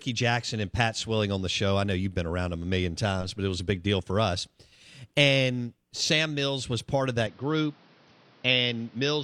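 Right after "was part of", at about 7.27 s, the speech suddenly goes dull and boxy and stays that way to the end. Everything above about 6.1 kHz vanishes, and a faint new background hiss appears well under the speech. There's no gap at the changeover and the loudness barely moves. That points to the input likely having switched to a poorer device, one with a narrower band and its own noise floor.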